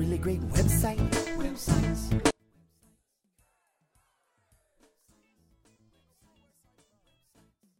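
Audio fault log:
2.31–7.79 s, one channel inverted: from 2.31 s to the end, the centred content collapses when the channels are summed to mono, dropping by about 38 dB and leaving only a faint residue. The likely cause is reversed polarity on one stereo channel, so whatever is common to left and right cancels in the sum. Only the small difference between the channels survives, which suggests the two sides carry nearly identical material here.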